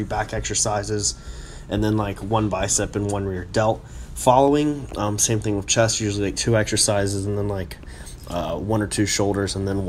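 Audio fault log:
2.01 to 9.43 s, clock drift buffer slips: a short, regular click or pop recurs about every 2.47 s, roughly four times in all, each a brief tick in the sound rather than a gap. The likely cause is two devices running on separate clocks that disagree by something like 70 parts per million. The buffer between them slowly drifts full or empty until a small block of around seven samples is dropped or repeated, producing the click at that steady spacing.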